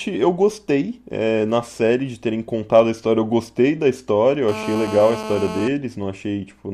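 A speech clip. From 4.48 to 5.68 s a hard, raspy GSM phone buzz sits over it at about 217 Hz, rich in harmonics. It is steady, as during a call. A nearby 2G phone's transmit bursts are being rectified in the audio circuit. The buzz is about 9 dB below the speech.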